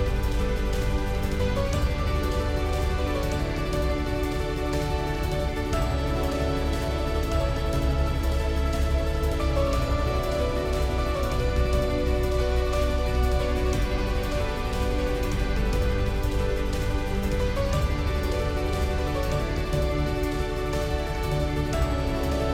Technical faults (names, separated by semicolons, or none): doubled audio track